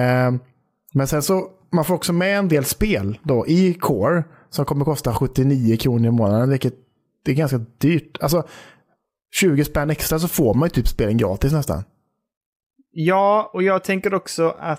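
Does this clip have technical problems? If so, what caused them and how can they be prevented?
No, this clip has no technical problems, so there is nothing to trace back to a cause or to prevent.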